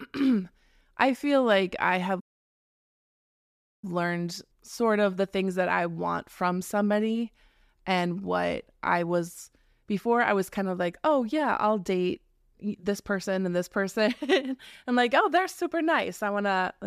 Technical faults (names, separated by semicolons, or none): playback stall